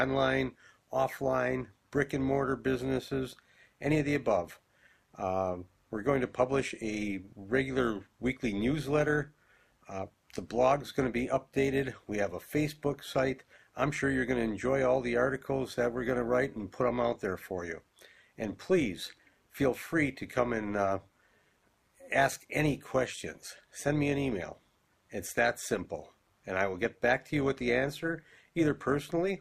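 From start to finish the level flutters by about 6 dB at around 200 times a second: overlap-add ripple, where frames rejoined with overlapping windows that fail to sum to constant gain. Unlike compressor pumping, it stays strictly regular, a rough robotic buzz locked to frame rate.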